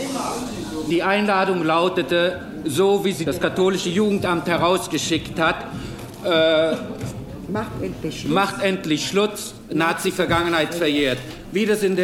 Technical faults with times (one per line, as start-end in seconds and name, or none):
9.63-12.03 crude rate conversion